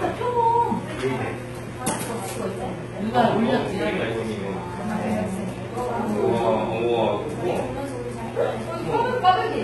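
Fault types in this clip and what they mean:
HE-AAC compression: throughout, heavily gritty, metallic treble ending near 11.8 kHz, likely copied up from lower bands, pointing to a bitrate near 16 kbps.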